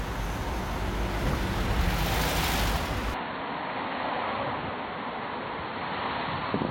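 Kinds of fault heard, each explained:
Input switched to a poorer device: the capture likely moved to a lower-grade input at 3.14 s, so from there the band stops near 4.4 kHz, the level drops by about 5 dB and a faint new noise floor appears, with no gap at the changeover.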